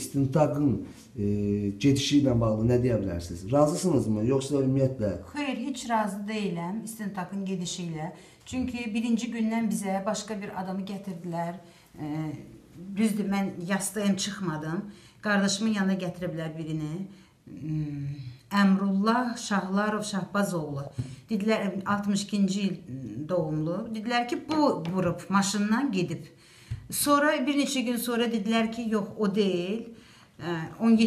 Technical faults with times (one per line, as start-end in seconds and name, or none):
none